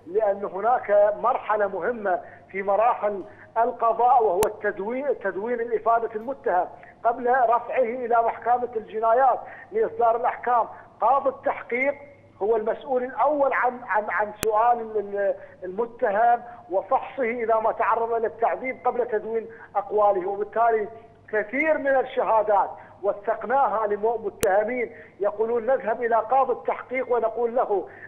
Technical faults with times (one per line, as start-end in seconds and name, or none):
4.43 file header played as audio
14.43 file header played as audio
24.43 file header played as audio